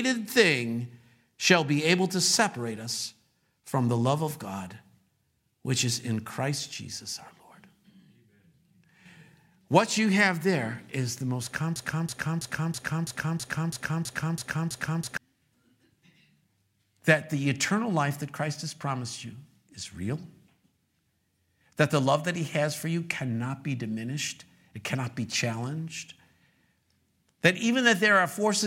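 At 11.76 s, after "there is the most", a broken-record loop begins. A 0.33 s fragment repeats ten times until 15.17 s. A stalled player or stream likely caused it, and the audio for that stretch is lost.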